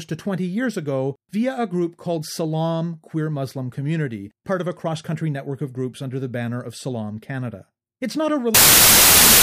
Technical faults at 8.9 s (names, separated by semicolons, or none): wrong sample width